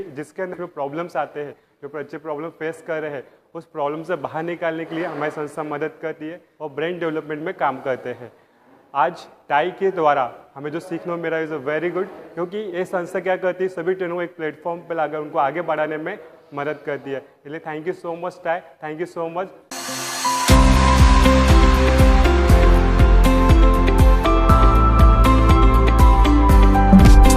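At 0.53 to 0.55 s the audio skips ahead: about a second of material was discarded and playback jumps straight to later sound with no fill. On a waveform the envelope changes abruptly at the splice, and a spectrogram shows mismatched patterns butted together.

From 0.63 to 1.61 s a jitter buffer speed-up follows. The receiver trims short pitch-period pieces, roughly a tenth of a second in all, so the audio runs at 112% pace without a pitch change. A spectrogram shows harmonics at unchanged heights but features packed closer in time.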